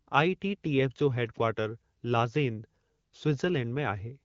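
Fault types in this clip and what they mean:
No faults can be heard in this speech. It comes through an AMR wideband (HD Voice) codec at 12.65 kbit/s, which leaves only light coding damage and nothing above about 7.4 kHz.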